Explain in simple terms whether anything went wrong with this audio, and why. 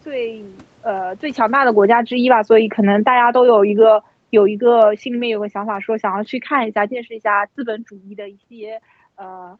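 From about 1.3 seconds to about 7.6 seconds, the speech slowly sinks from loud to noticeably quieter, and the room's background noise sinks with it. That is automatic gain falling: the call's volume control judged the incoming sound too loud, or its background noise too strong, and kept turning itself down bit by bit over those six seconds. Because it lowers everything at once, voice and background fade together, which is how you can tell it apart from the speaker simply moving away.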